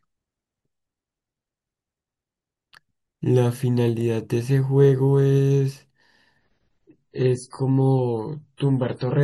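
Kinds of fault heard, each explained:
Adaptive stream at a lower bitrate: from 6.38 s to the end, speech abruptly loses treble above about 10.6 kHz and turns smeary, consistent with a switch from roughly 128 to 24 kbit/s MP3.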